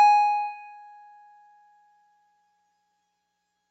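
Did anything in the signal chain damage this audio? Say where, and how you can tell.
Yes. The damage is in the call processing: a noise suppressor built for speech was left running on this music for the whole clip. You can hear it pump, with held notes and tails sinking by something like 20 dB while attacks get through, because the suppressor treats sustained tones and ambience as noise. The top end stops near 8 kHz, which fits the call path's Opus coding bandwidth, not the suppressor.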